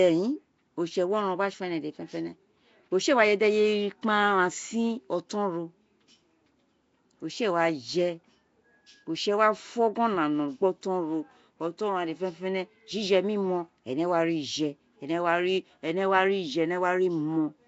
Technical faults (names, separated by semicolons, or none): Nellymoser compression